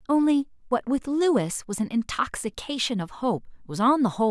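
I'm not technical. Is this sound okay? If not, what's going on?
Yes, nothing wrong can be heard in this speech recording.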